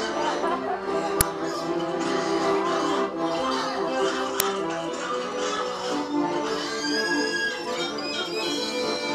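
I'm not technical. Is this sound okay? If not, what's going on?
No. There are two quick cracks, at 1.21 s and 4.40 s. That's an uninitialised buffer: the player sent out about 5 ms of leftover memory before the real sound arrived.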